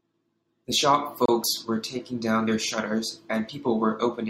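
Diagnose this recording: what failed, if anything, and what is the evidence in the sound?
The failure sits at the codec stage: a gap at a join of encoded pieces. At 1.26 s the speech drops out for about 29 ms, resuming at 1.28 s exactly where it left off, with nothing missing. On a waveform this is a short flat run with smeared edges; a spectrogram shows a clean vertical blank band across all frequencies, its borders slightly blurred by the codec. Two separately encoded segments were joined without removing the encoder's start delay and end padding.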